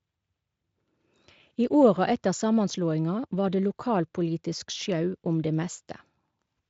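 No technical faults occur anywhere in this speech, so there is nothing to describe in time order.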